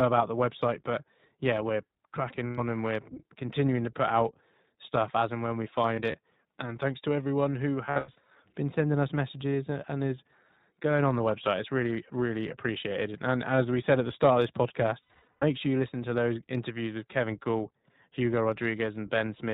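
Speech passed through the iLBC codec, whose character fits its 15.2 kbps mode with 20 ms frames. Nothing above 4 kHz survives, so the sound is narrowband and muffled at the top, and the coding damage is plainly audible as a rough, slightly synthetic texture. Lost iLBC frames then break up the stream in four places. At 2.46 to 2.60 s a single 120 ms gap, consistent with six consecutive frames, is filled by the decoder repeating the last pitch cycle mixed with noise, heard as a held, buzzy vowel. At 5.94 to 6.15 s about 60 ms of loss is scattered over 200 ms, with runs of up to roughly 40 ms. At 7.86 to 8.26 s roughly 240 ms goes missing across 400 ms, and at 15.03 to 15.44 s roughly 320 ms across 400 ms, both with runs near 100 ms. These produce stuttering, breathy smears that fade during longer runs. Because each iLBC frame decodes independently, the sound snaps back almost immediately after each loss.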